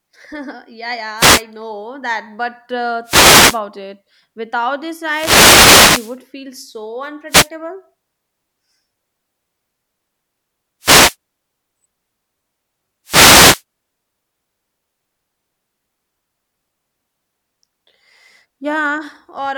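Speech interrupted by short bursts of static at 1.17–1.43 s (just before "know that"), 3.04–3.60 s, 5.06–6.19 s (before "feel so"), 7.29–7.49 s (after "feel so"), 10.81–11.16 s and 13.05–13.63 s. These are wireless microphone noise hits: the analogue FM radio signal fades as reflections cancel, and receiver noise swells over the sound.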